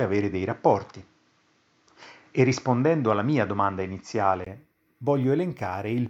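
From the start up to about 4.47 s, the speech sounds like it's coming through a poorer input: nothing above about 7.6 kHz, so it's a bit dull and boxy, with faint background noise sitting roughly 45 dB down. At 4.47 s there's a brief silence of around 20 ms, then the sound opens up and the level changes by roughly 5 dB. That points to an input switched to a poorer device, likely a headset call profile or a second microphone, before switching back.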